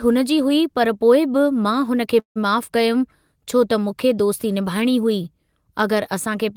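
Speech with a call audio freeze from 2.19 to 2.38 s. The last sound is stretched into a fading buzz, then about 120 ms of silence. Nothing is lost. The speech resumes where it stopped, 163 ms later. Likely cause: delayed packets emptied the jitter buffer.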